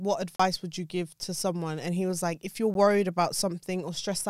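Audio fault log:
0.36–0.40 s, block of digital silence: The speech drops out for about 35 ms and returns abruptly, so it is heard as a short hole.
2.74 s, block of digital silence: A 12 ms dropout, consistent with a 512-sample buffer left unfilled, is heard as a tick.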